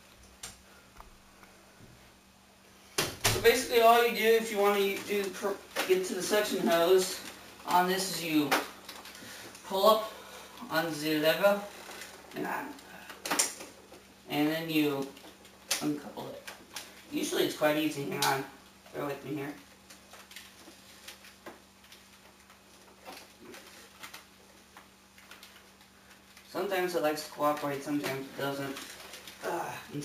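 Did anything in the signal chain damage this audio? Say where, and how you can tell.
Yes, throughout, at the sample-rate conversion stage: imaging from sample-and-hold upsampling. A metallic fizz between 8 and 16 kHz, about 16 dB down, fits a 16 kHz source raised to 44.1 kHz by repeating samples. Unlike steady hiss, it tracks the sound's level and mirrors its movement.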